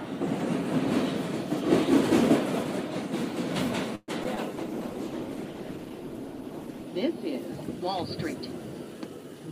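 At 3.95 s the sound stops moving forward: for about 0.12 s the last moment is stretched into a fading buzz or hiss that trails off into roughly 30 ms of silence, then the audio resumes at 4.10 s exactly where it left off. This is most likely a call audio freeze, with packets held up in transit until the jitter buffer ran dry. Unlike packet loss, nothing is skipped. A gap of about 124 ms is inserted instead, so everything afterwards arrives that much later.

Immediately after, at 4.24 s and again at 4.35 s, there are two short concealed packet losses. In each, about 20 ms of audio never reached the decoder in time. The receiver bridged the holes by extending the preceding sound, for about 7 ms and about 18 ms respectively, before blending back. Each one is heard as a tiny smear or wobble rather than a pause. That separates them from the freeze: material is genuinely lost here.

From 4.53 s to 6.93 s a call bitrate drop takes hold. 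The encoder was pushed from 128 kbps down to 15 kbps and stayed at the bottom for about 2.3 s. At that rate Opus codes coarsely and trims the upper frequencies, so the sound turns dull, rough and watery across the whole span. This is a sustained change in tone, not a brief glitch, and it lifts once the rate recovers.

Between 8.94 s and 9.48 s a jitter buffer speed-up makes the audio run at about 114 % of normal speed. The receiver had built up surplus delay and cut it back by repeatedly removing short pitch-period slices, about a tenth of a second in total. The pitch stays put while the pace quickens, which is what separates this from a sample-rate mismatch, where speed and pitch rise together.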